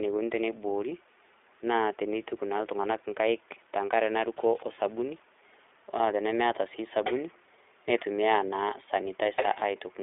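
iLBC codec coding runs throughout the speech, which fits the 15.2 kbps mode: each 20 ms frame is coded on its own, leaving plainly audible rough, synthetic grain, while a 300 Hz to 3.6 kHz line band removes everything above 3.7 kHz, sounding thin and muffled.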